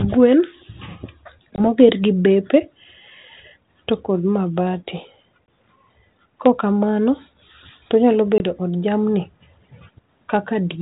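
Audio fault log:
1.56–1.60 s, 5.46 s and 8.38–8.51 s, packet loss on an ADPCM call: each time about 20 ms of audio, roughly one packet's worth, drops out to a sharp-edged silence. When the sound comes back it can land at the wrong level or with a small click and some grit, because the decoder's adaptive predictor and step size have drifted from the sender's while data was missing. It pulls itself back into line within a few tens of milliseconds on the 32 kbit/s G.726 stream.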